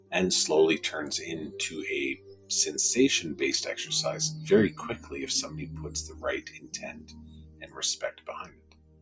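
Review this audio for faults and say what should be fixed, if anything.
A noise suppressor built for speech was left on for this non-speech sound. It treats sustained content as noise, so levels swing by roughly 20 dB and the sound pumps and thins.

Sound cut by the noise suppressor: the suppressor singled out held and decaying passages and pushed them down. This happens at 2.15–2.5 s (about 13 dB), 4.97–5.13 s (about 8 dB), 6.08–6.24 s (about 7 dB), 6.45–7.78 s (about 13 dB), and from 8.44 s to the end (about 14 dB), so tails sink away early.

To prevent this, disable the noise suppressor, or switch the call to a music or original-sound mode, whenever the input isn't speech.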